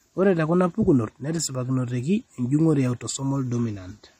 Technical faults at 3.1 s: low-bitrate audio saved at a high bitrate

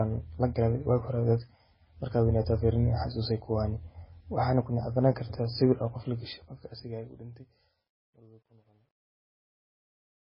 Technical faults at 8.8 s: MP3 compression; truncation distortion on a fade

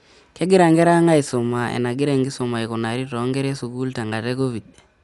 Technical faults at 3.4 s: Dolby Digital compression

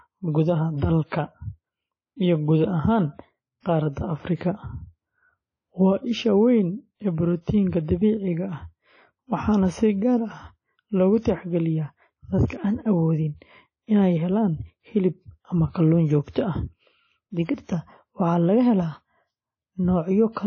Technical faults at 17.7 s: WMA compression; pre-echo

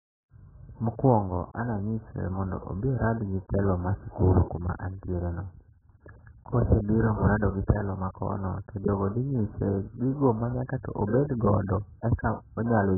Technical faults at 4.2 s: AAC compression

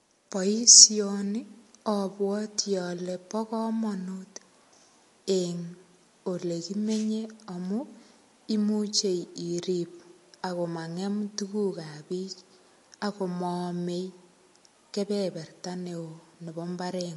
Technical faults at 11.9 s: MP3 compression

